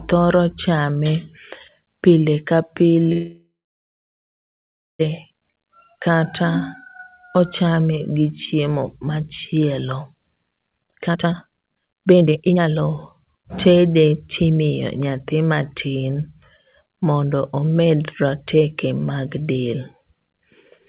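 At 3.12 s, just after "pile ka", the speech halts for about 1.9 s until 5.01 s. A brief fading buzz continues the last sound, then roughly 1.5 s of silence. This is a call audio freeze, likely from delayed packets draining the jitter buffer. Unlike a dropout, the speech resumes exactly where it stopped, with nothing lost.

From 10.70 to 14.89 s, a jitter buffer speed-up makes the speech run at about 145% speed, hurried but at unchanged pitch. Short pitch-period pieces were cut repeatedly, roughly 2 s in total, to shrink a backlog. The steady pitch separates this from a playback-rate error. Throughout, the narrowband telephone sound stops at 4 kHz.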